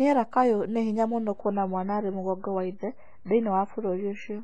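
At 1.41 s the speech abruptly turns dull and swirly, with nothing above 7.5 kHz, and it stays that way to the end with no gap at the switch. This is an adaptive stream at a lower bitrate: the player dropped to a leaner encoding, likely because the connection slowed, and the sound points to MP3 falling from about 128 kbit/s to 16 kbit/s.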